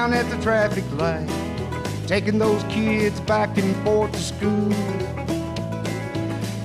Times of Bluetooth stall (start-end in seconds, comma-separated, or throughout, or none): none